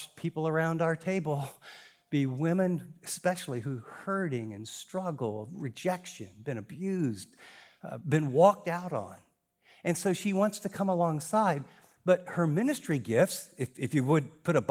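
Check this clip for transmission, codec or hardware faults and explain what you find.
No faults found here.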